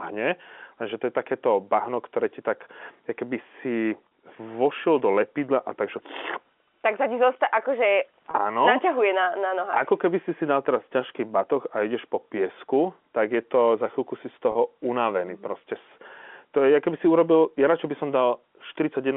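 Three short dropouts, each about 30 ms long, get patched by packet loss with pitch repetition: at 4.08 to 4.11 s, at 8.31 to 8.34 s right after "sa ti zosta akože", and at 14.52 to 14.55 s just after "za chvíľku si z". The receiver fills each gap by repeating the last pitch cycle, which fits a single lost packet, so you hear a brief held, buzzy smear over the band-limited telephone G.711 sound.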